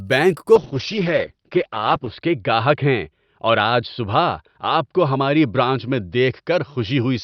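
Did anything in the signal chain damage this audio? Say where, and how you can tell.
Yes. A call bitrate drop hits the codec stage from 0.58 s to the end. The encoder falls from 64 to 8 kbps and sits at that floor for 1.56 s. The speech turns coarse and watery, and bandwidth shrinks from 20 kHz to 6 kHz, dulling the top end.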